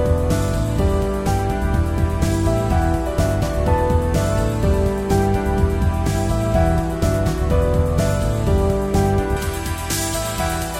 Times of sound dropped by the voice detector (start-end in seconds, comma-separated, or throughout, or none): none